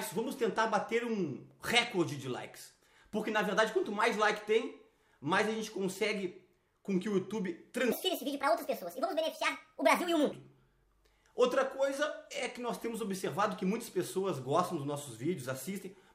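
From 7.92 to 10.32 s the audio suddenly runs fast and high, sped up 1.5 times and raised about 7 semitones. This is a wrong sample rate fault: the samples play back faster than they were captured, with no conversion, which fits 32 kHz audio played at 48 kHz.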